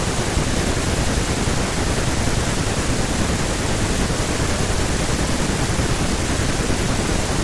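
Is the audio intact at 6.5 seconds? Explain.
Yes, at 6.5 seconds the speech plays through intact, with no audible fault at that moment.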